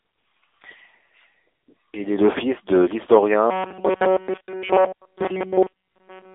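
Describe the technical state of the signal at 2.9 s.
At 2.9 s the speech carries the AMR narrowband mobile codec, present across the whole clip. Content sits in a 300 Hz to 3.6 kHz line band with nothing above 3.7 kHz, and the plainly buzzy, synthetic pulse-excited texture fits a low rate near 8 kbps.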